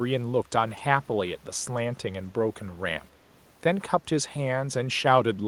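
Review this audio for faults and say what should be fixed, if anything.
Echo leak at 0.76 to 0.81 s and again at 1.76 to 1.81 s: a brief, faint copy of the speech returns about 251 ms late, roughly 30 dB below the direct sound the first time and near 40 dB below the second. The likely cause is a far-end loudspeaker whose echo canceller let residue from its microphone pass back into the call. Preventing it means improving echo cancellation at that end, or having that participant use a headset.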